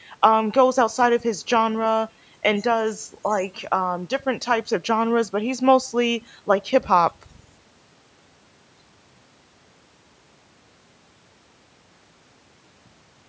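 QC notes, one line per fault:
No faults are present in this speech clip. It went through a call's microphone processing, so the lowest bass is trimmed and nothing sits above 8 kHz, which is how that path normally sounds.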